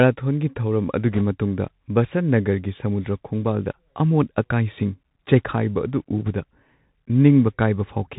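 Bluetooth CVSD headset codec, present from start to finish: the speech has been squeezed through the narrowband headset codec, which describes the waveform as a stream of single up-or-down steps whose size adapts as it goes. Everything above 4 kHz is gone, leaving a boxed-in, telephone-like tone. Loud, bright moments outrun the step size and smear into distortion, s sounds turn scratchy, and a grainy hiss sits under the voice. The character fits a 64 kbps one-bit stream.

Bit errors on a Bluetooth voice link, from 1.13 to 1.22 s and again from 6.26 to 6.30 s: in these two short stretches, bits in the headset stream were flipped, at a rate somewhere around one or two percent. Because each bit only nudges the waveform by one small step, and the codec quickly recovers, the damage comes through as a brief rushing, crackly roughness over the speech rather than sharp clicks. The first burst lasts about twice as long as the second.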